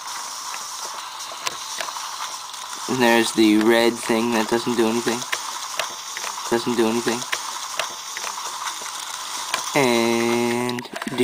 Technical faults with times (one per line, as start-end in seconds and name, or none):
6.51-8.51 stream segment repeated